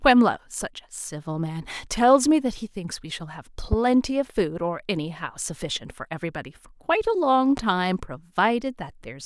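At 3.73 to 3.75 s a loud pop cuts across the speech, a single sharp transient peaking about 10 dB above the surrounding level. A second, weaker loud pop follows at 7.57 to 7.60 s, about 5 dB above the signal. Each lasts under 30 ms and the speech continues underneath. The abrupt onset and brief decay point to a sudden voltage step, likely from a connector, switch or static discharge, shaped by the downstream circuitry into a short thump.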